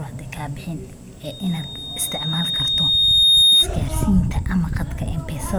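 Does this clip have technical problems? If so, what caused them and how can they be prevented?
Yes. A loudspeaker feedback squeal runs from 1.23 s to 3.67 s in this speech clip: a single tone near 3.7 kHz swells over roughly two seconds until it sits about 10 dB above the speech. The microphone is picking up the loudspeaker it drives, and at that frequency the loop gain exceeds one, so the tone keeps reinforcing itself. Prevent it by lowering gain, moving the microphone away from the loudspeaker's coverage, or notching around 3.7 kHz.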